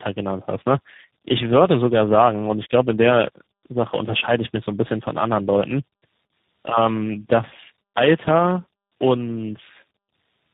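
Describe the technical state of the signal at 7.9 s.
At 7.9 s the signal shows tandem speech coding, present across the whole clip rather than just at this moment. The speech passed through several speech codecs in sequence, roughly four, which fits a chain ending in an 8 kbit/s coder like G.729A. Each stage re-encoded the previous stage's damaged output, compounding the losses. The result is rough, muffled, warbling speech with nothing above 3.8 kHz.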